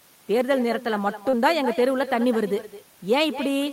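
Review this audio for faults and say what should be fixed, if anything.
There's echo with no canceller running through the whole clip: the far end's loudspeaker is feeding its mic, so every phrase comes back about a fifth of a second later, about 13 dB down and thinner. Enabling acoustic echo cancellation on that endpoint, or getting them onto a headset, would fix it.

Around 1.29 to 1.35 s there's a short concealed packet loss. About 40 ms of audio never arrived in time, and the decoder papered over roughly 34 ms of it by extending the preceding sound, leaving a brief smear before it rejoins. A bigger jitter buffer or forward error correction on that link should prevent this.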